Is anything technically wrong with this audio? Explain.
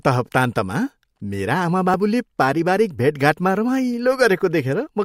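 Yes. An overlap between stream segments occurs at 1.94 s. At a segment boundary, two pieces of the stream carried timestamps that covered the same moment, and the player discarded the supposedly repeated portion even though that sound existed only once. About 9 ms of the speech is therefore lost, and the waveform on either side is butted together without matching. This is heard as a tiny skip in the speech at that point.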